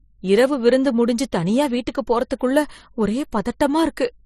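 Throughout, the speech was likely passed through transcoding between lossy codecs, an HE-AAC encode followed by MP3, both at rates pointing to roughly 32 to 39 kbit/s. Nothing remains above 13.8 kHz, and MP3 smearing sits layered over the earlier codec's artefacts.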